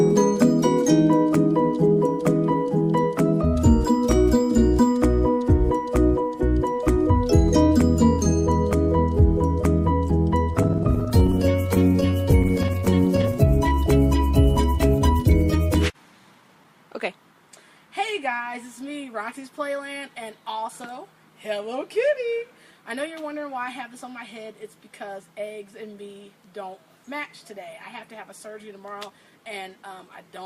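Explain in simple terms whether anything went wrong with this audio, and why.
Two kinds of fault can be heard. From 10.53 to 13.35 s there are repeated stalls (stutter). Audio arrived late again and again, so playback kept running dry. Each short gap, the longest 14 ms, was filled by stretching the last sound. Nothing is lost, but it drags and stutters.

There is also a jitter buffer speed-up, twice: from 15.69 to 16.65 s at 110% speed, and from 28.80 to 29.84 s at 109%. Too much audio had piled up, so tiny slices were cut out, about a tenth of a second in total each time. The sound rushes but keeps its pitch.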